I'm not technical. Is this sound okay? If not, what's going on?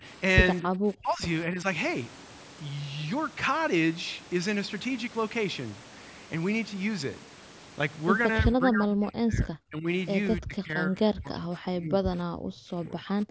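No, not quite. The voice keeps dipping or partly dropping out: for a split second right at the start (0 to 0.04 s), then at 0.62 to 1.22 s, 1.52 to 1.65 s, 8.42 to 9.87 s, and from 10.41 s to the end. This is likely speech suppressed in double talk. The other side was playing through the loudspeaker while this person talked, and the echo canceller couldn't tell the two apart, so it turned this voice down along with the echo. The last two dips go deepest, and the one at 1.52 s is small.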